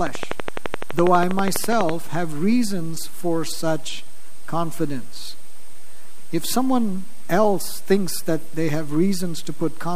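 Right from the start, at 0.07 s, there's a train of clicks running until about 1.90 s: a steady ticking at 12 clicks per second, evenly spaced, around twenty of them in all, each popping out roughly 15 dB above the sound underneath. The clicks all have much the same shape, which likely points to something injecting a repeating pulse, such as interference from nearby equipment or a dodgy connection or power supply.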